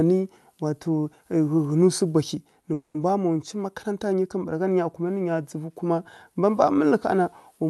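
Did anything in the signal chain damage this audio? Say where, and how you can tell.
Yes. At the network and jitter-buffer stage there is a call audio freeze from 2.73 to 2.96 s: for about 0.21 s the sound stretches into a fading buzz or hiss instead of moving on, then resumes where it left off with nothing skipped. The likely cause is delayed packets draining the jitter buffer, so the receiver filled the wait and everything after runs 210 ms later. On a spectrogram this shows as smeared, repeated harmonic bands decaying over that stretch; the waveform shows a shrinking, periodic envelope.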